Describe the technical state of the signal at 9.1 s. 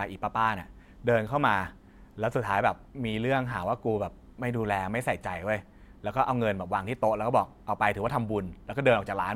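Nothing faulty is audible at 9.1 s; the speech signal is intact there.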